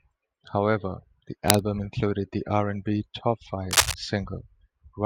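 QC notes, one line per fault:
1.48–1.63 s and 3.71–3.94 s, cable scratch noise: two short bursts of dense, uneven scratching lie over the speech. The first is about as loud as the speech and the second somewhat louder. The likely cause is a worn cable, connector or control being moved, so its contact resistance jumps around rapidly. Unlike isolated clicks or steady crackle, each burst is a brief, irregular rustle that stops once the movement ends.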